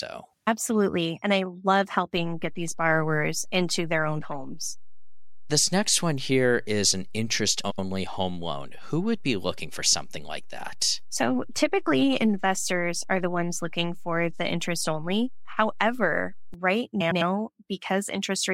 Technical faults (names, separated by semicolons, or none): DC step; frames out of order